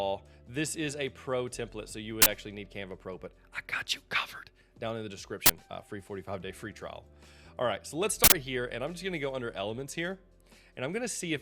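At 2.22 s, 5.46 s and 8.24 s, loud bursts of digital noise break in. Each is an uninitialised buffer: blocks played before any audio was written, so leftover memory became samples. The first two last 40 ms, the third 80 ms.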